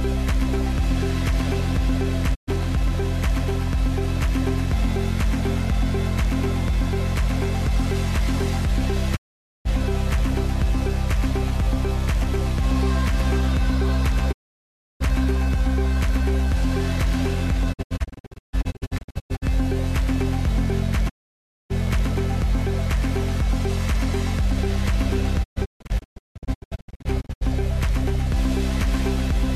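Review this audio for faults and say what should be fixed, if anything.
Digital broadcast dropout: the receiver lost frames and muted, with 20 ms fades, at 2.33–2.49, 9.15–9.67, 14.31–15.02 and 21.08–21.72 s. At 17.72–19.44 and 25.42–27.43 s there are scattered short holes. The missing audio is unrecoverable. To prevent this, improve reception margin with better antenna placement or signal strength so frames pass error checking.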